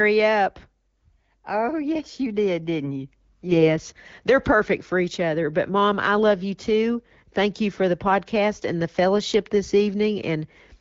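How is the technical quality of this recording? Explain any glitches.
The recording is AMR wideband (HD Voice) speech at a rate that fits 12.65 kbit/s, with light codec colouring and one glitch. From 3.46 to 3.68 s, just after "you did didn't you", AMR bit errors occur. The roughly 4 percent of flipped, lightly protected bits misplace excitation pulses and skew the finer parameters. The voice turns hoarse and gargly but keeps its pitch and level, unlike packet loss, which mutes or smears the audio.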